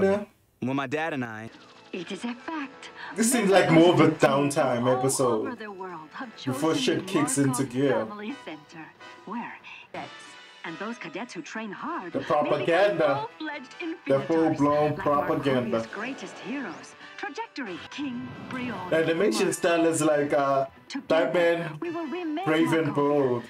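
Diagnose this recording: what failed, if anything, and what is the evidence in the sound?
The level falls abruptly by about 6 dB at 1.25 s and recovers at 3.56 s. It drops again at 4.26 s and stays down to the end. The steps are sudden, with no fade. This is the sound of one channel dropping out. The likely cause is in the analogue wiring, such as an intermittent connector or cable. When one side goes silent, the mono sum loses half of the shared material, which gives a 6 dB drop. Anything carried only in that channel is gone.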